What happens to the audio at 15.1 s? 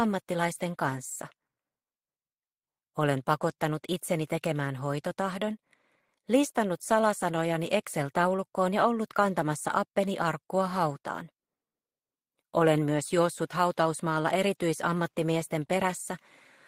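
Nothing goes wrong at 15.1 s; the audio plays through that moment intact, with no dropout, click, distortion or other fault.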